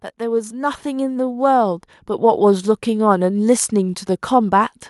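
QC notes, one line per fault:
0.18–4.07 s, automatic gain rising: the level of the speech and the background swells together, steadily, by about 12 dB over nearly four seconds. The automatic gain control judged the input too quiet and kept raising its gain, lifting everything at once.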